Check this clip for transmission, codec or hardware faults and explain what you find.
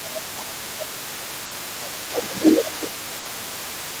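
Three faults are present in this speech clip: echo leaking through, suppression during double talk, and two packet-loss bursts.

The other side's voice leaking through runs under the whole clip, 0 to 4 s. It sits about 15 dB below the talker. The likely cause is a loudspeaker feeding the microphone, with the echo canceller leaving a residue.

Speech suppressed in double talk occurs from 0.02 to 2.38 s and again from 3.06 to 4.0 s. The talker's level dips by about 15 dB in the first stretch and about 20 dB in the second. This likely happens because the echo canceller cannot separate the talker from the echo and turns both down.

A burst of packet loss hits at 1.45 to 1.54 s and at 3.19 to 3.28 s. In each, the receiver stretches the last sound for 60 ms and lets it fade to a held buzz or hiss. Then it jumps ahead, with 60 ms of speech gone.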